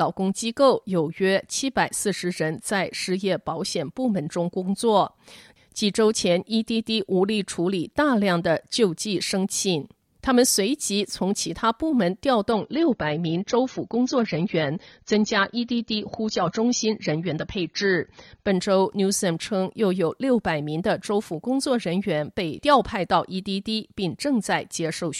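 At 12.5 s the adaptive stream switched down to a lower bitrate, most likely because the connection slowed, and it stayed there for six seconds before stepping back up at 18.5 s. The change is abrupt but seamless, with no gap. Through that stretch codec artefacts thicken. The degradation fits a drop from an AAC stream near 96 kbit/s to one near 24 kbit/s.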